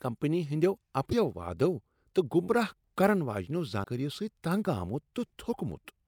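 At 1.09 to 1.13 s and again at 3.83 to 3.86 s, the speech abruptly skips forward and a short glitch of roughly 35 to 40 ms replaces the sound, each lasting under two frames' worth of audio at about 24 ms per frame. The likely cause is a broken MP3 bit reservoir: after frames went missing, the next frame reached back for borrowed data and decoded bytes belonging to a different frame.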